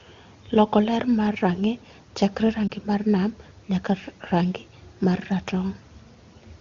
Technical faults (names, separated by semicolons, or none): lost AMR speech frames